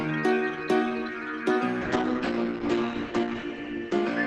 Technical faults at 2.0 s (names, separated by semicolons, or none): call bitrate drop